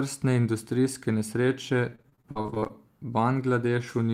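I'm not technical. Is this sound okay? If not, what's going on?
No. Right after "industrijske nesreče", from about 1.89 to 2.71 s, the speech breaks up with repeated packet loss, which gives it a robotic sound. Over that stretch more than a dozen tiny pieces go missing, none longer than about 41 ms. Each hole is patched by stretching the sound just before it, so over a third of the stretch is filler. Unlike a single dropout, which is one clean gap, this is a rapid, choppy stutter.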